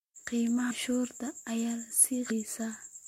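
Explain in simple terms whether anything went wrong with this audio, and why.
Whole chunks of the compressed speech never reached the player. They were either missing from the file or rejected by the decoder as damaged. This fault is called compressed frames skipped. At 0.69 s the speech suddenly jumps ahead by almost half a second, and at 2.30 s it jumps again by about half a second.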